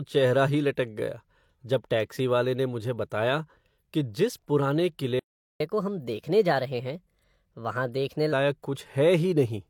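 At 5.19 s the speech cuts off in mid-flow and the output stays silent until 5.60 s, about 0.41 s. This is a playback stall, likely the player running out of data or having its thread blocked. Unlike a brief dropout, the silence lasts long enough to register as a halt.

From 5.60 s to 8.32 s the player runs in catch-up at higher speed, resampling its backlog at 1.15 times normal speed. Pitch rises by about two semitones along with tempo. That joint rise distinguishes it from a pure pitch shift, and normal speed returns after 8.32 s.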